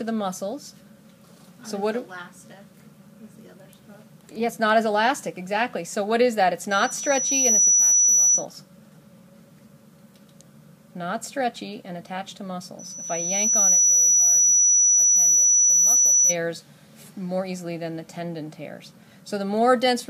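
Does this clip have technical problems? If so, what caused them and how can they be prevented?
Yes, there's loudspeaker feedback squeal twice, from 6.70 to 8.46 s and again from 12.79 to 16.36 s. Each time a single 5.9 kHz tone swells over about a second until it sits roughly 10 dB above the rest of the sound. The mic is hearing its own loudspeaker, and at that one frequency the loop gain tops unity, so the tone keeps feeding itself. To prevent it, pull the mic back from the speaker or aim it away, and notch out around 5.9 kHz.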